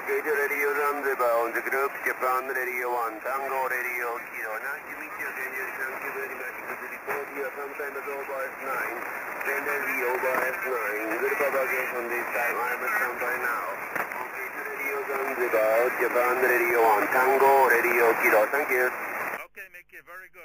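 No technical faults are audible.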